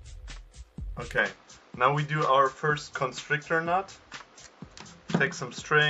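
From 1.18 s to the end, the sound turns duller with nothing above 7.6 kHz, shifts a few decibels in level and gains faint new hiss, likely an input switched to a poorer device.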